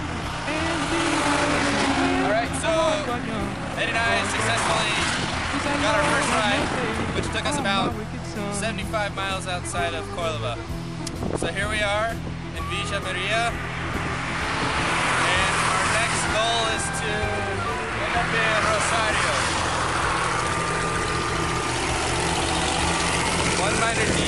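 From 0 to 7.94 s there's a time-stretched section running about 1.45x fast, pitch unchanged but rushed, likely software dropping short chunks to squeeze it.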